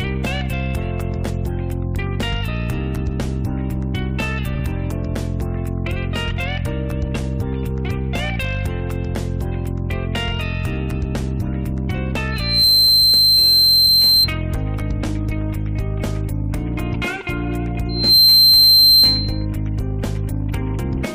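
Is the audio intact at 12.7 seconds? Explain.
No. Loudspeaker feedback squeal runs from 12.31 to 14.29 s. The microphone re-amplifies its own speaker, so a 4.1 kHz tone swells within a fraction of a second and towers well above the sound.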